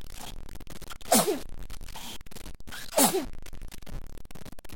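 Running the whole way through there's a harsh, buzzy grit riding on the sound, and even the quiet stretches fill with a steady hiss of noise. That's likely a stuck bit, one converter bit jammed. Its step sits at about -35 dBFS, so about half the values are off by that much.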